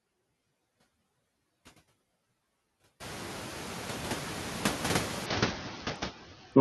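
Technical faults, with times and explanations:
Throughout: noise suppressor artifacts. The suppressor cuts bands it judges to be steady noise by about 8 dB, frame by frame. The room noise, which climbs about 21 dB around 3 s, dips in pauses and swells under speech.
5.26 to 6.61 s: Bluetooth SBC bit pool drop. The treble dulls and gritty quantisation noise rises through to the end, as when a congested link starves the upper sub-bands. This fits the bit pool falling from 28 to 7, about 66 kbps.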